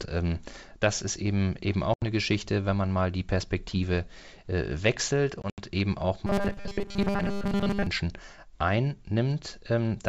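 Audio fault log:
1.94–2.03 s and 5.42–5.63 s, packet loss on an ADPCM call: the first gap is a clean 80 ms hole; the second drops about 100 ms scattered over 160 ms, with the longest run 80 ms. That fits 20 ms packets going missing. Each hole is hard-edged silence, and when audio resumes the decoder's adaptive predictor and step size no longer match the sender's. The sound comes back slightly distorted before the decoder catches up.
6.27–7.87 s, robotic sound from repeated short buffers: for about 1.6 s the audio turns into a stiff, metallic buzz at 200 Hz that still roughly tracks the speech. The cause is likely audio arriving too slowly, so the playback side keeps looping the last chunk and skips most of the real signal, around two thirds or more. A 200 Hz buzz fits a repeat length of about 5 ms.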